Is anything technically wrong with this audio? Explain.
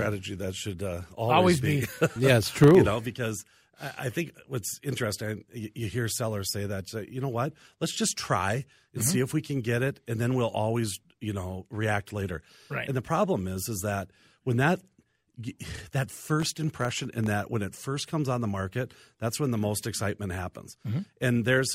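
Yes. The speech has processor overload crackle from 2.43 to 2.75 s and from 16.13 to 17.27 s, just before "that when it first". Repeated missed buffer deadlines leave hard-edged silent gaps, which fits buffers under a millisecond dropping in runs, heard as gritty crackle.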